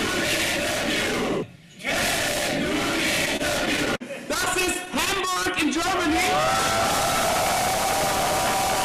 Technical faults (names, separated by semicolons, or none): repeated stalls (stutter)